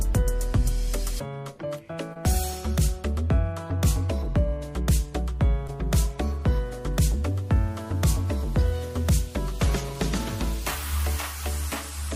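Short concealed packet loss occurs at 2.13 to 2.17 s and again at 5.67 to 5.71 s. Each time about 20 ms of audio arrived too late, and the decoder patched the gap by extending the preceding sound, leaving a brief smeared wobble before the real signal resumes.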